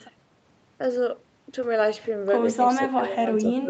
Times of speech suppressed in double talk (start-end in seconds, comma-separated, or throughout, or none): 2.79-3.69